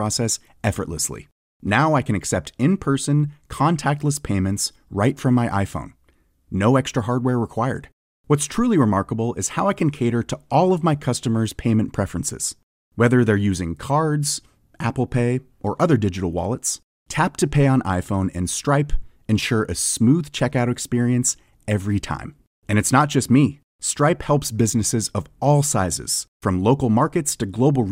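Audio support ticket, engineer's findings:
Speech audio reviewed in full, no audible faults found, nothing to escalate.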